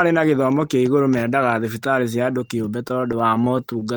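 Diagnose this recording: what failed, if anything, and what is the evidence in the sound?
From 2.88 s to 3.89 s the speech drags and stutters, with 14 brief holds of up to 18 ms that add about 150 ms. These are repeated stalls (stutter) at the network stage. Packets arrived late, the jitter buffer kept emptying, and the receiver extended the last sound each time.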